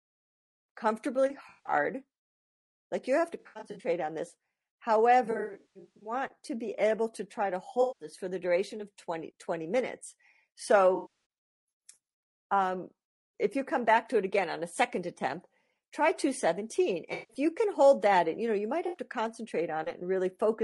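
Throughout, the speech sounds rough and grainy, with noise filling the gaps between harmonics and a thin, synthetic-sounding top band. This is plainly audible low-delay AAC compression, likely AAC-ELD at around 32 kbps. On a spectrogram the harmonic lines look blurred and speckled with noise.

AAC frame loss with concealment then breaks the sound at 1.49–1.73 s, 3.39–3.87 s (after "you have to", before "on this"), 5.25–6.13 s, 7.81–8.07 s, 10.95–11.07 s, 17.13–17.37 s (before "you can hold that") and 18.87–18.97 s (after "you know you might"). At each point the decoder fills the missing audio from the last good spectrum, so those spots sound smeared, noisy or phasey. Between 5.25 and 6.13 s about half a second drops out in scattered runs, the longest around 150 ms. On a spectrogram these patches show as smudged, noise-filled blocks where the harmonic lines break up.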